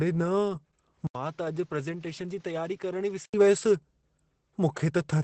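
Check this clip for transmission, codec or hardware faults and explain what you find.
Two faults are present.

Throughout, Opus voice compression at 12 kbps in SILK mode codes the speech coarsely, leaving it muffled, hoarse and slightly robotic.

From 1.07 to 3.34 s, the input likely switched to a poorer device. After an 80 ms gap, the speech turns duller and around 10 dB quieter, with added background noise.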